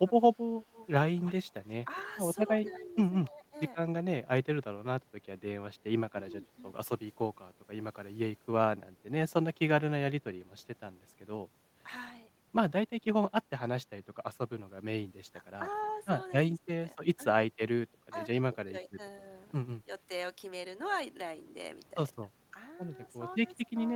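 From 0.21 to 0.6 s the speech drops by roughly 15 dB in short patches. This is speech suppressed in double talk, likely an echo canceller turning the talker down while the other side was also speaking.

Between 0.73 and 3.28 s an echo leak adds a faint copy of the speech trailing about 240 ms behind, sitting about 20 dB below it. This is likely loudspeaker pickup that the far end's echo canceller did not fully remove and returned.

The same ducking returns at 2.8 to 3.55 s, shallower at about 5 dB. It comes back at 6.11 to 6.31 s, in scattered dips across 15.26 to 19.89 s, and at 22.22 to 23.79 s, each time as brief cuts of roughly 15 dB.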